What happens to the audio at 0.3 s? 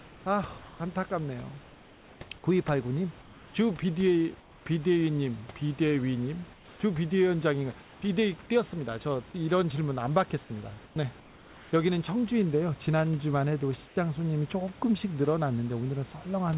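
Around 0.3 s the background sounds flat and steady. Between 0.0 and 0.8 s, 480 ms of real room sound gives way to featureless hiss. This is likely comfort noise in place of the background: the sender paused during silence, and the receiver filled the gap with synthetic noise.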